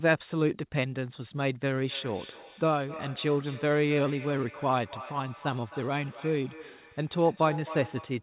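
From 1.87 s right through to the end of the clip, there's feedback echo between two devices. The speech keeps coming back roughly every third of a second, each pass thinner and more ringing, and the loudest repeats sit at about 15 dB below the direct voice. What's happening is that a second device in the room is replaying the call, its sound is getting back into the first microphone, and the echo canceller there only removes what its own speaker plays. All of this sits in a narrow telephone band with nothing above 4 kHz, which fits a G.711 A-law call path.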